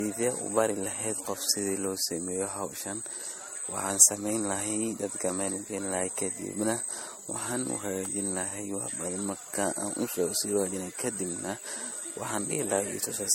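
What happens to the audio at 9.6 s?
At 9.6 s the speech carries generation loss, which runs through the whole clip rather than starting there. It sounds swirly, hollow and smeared, with blunted consonant attacks, most likely from being passed through an MP3 encoder about four times at something near 60 kbit/s, each pass re-quantising on a shifted frame grid. A spectrogram shows a hard ceiling at 16.5 kHz, with flickering holes and blotchy patches below it. The waveform's transients look softened.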